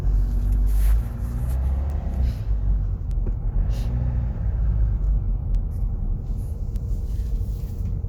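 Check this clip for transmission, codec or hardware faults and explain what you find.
One hardware fault: word clock ticks, roughly once a second from 0.68 s to 7.98 s, around seven in all. The receiver isn't locked to the sender's clock, about 15 ppm out, so each slip drops or repeats one sample, giving a sharp tick.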